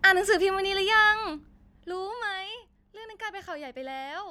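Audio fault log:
1.02–2.42 s zipper noise: the speech level falls about 15 dB in unsmoothed 1 dB steps, roughly ten a second, each step clicking into an audible zipping tick.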